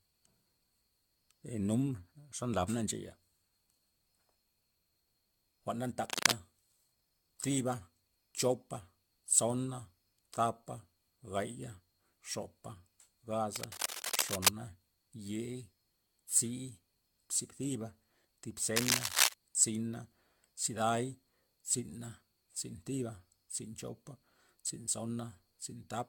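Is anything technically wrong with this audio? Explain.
Yes. There are two problems.

Generation loss runs through the whole clip. The speech sounds swirly, smeared and hollow, and consonant attacks blur. Nothing is present above 17.5 kHz, which fits an AAC-LC chain at 96 kbit/s. The likely cause is around seven re-encodes, each adding fresh quantisation noise and spectral holes.

Cable scratch noise appears three times. It runs from 6.05 to 6.34 s, just after "jwa'n na", from 13.56 to 14.49 s, and from 18.76 to 19.34 s, just after "tzi thiba thib". Dense, uneven rustling sits over the speech, roughly 5 dB above it at the first and last events and about level with it in the middle. The likely cause is a worn cable or connector being moved.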